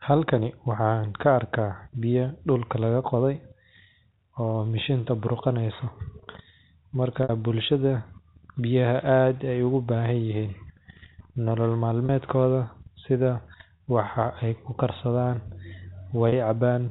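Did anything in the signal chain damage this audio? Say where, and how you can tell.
Yes, at the network stage: packet loss with pitch repetition. At 7.23 to 7.29 s, 12.06 s, 13.78 s and 16.29 s the speech briefly holds a buzzy, repeated tone as the receiver loops the last pitch period to fill each gap. The 60 ms gap fits two lost packets, the others one.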